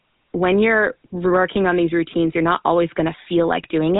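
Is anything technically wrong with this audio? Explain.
Yes. Throughout the speech, GSM full-rate codec damage is plainly audible. The voice sounds buzzy and gravelly, with nothing above about 3.8 kHz. It fits a 13 kbps pulse-excited vocal tract model.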